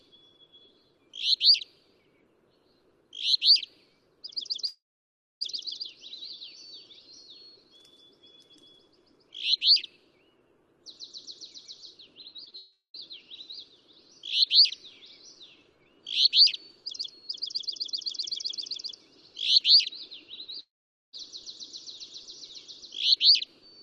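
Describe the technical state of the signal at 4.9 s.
At 4.9 s the signal sits inside a long network dropout from 4.67 to 5.43 s: about 0.74 s of audio is lost, the last sound fades to silence, and playback resumes later, likely from a stalled packet stream.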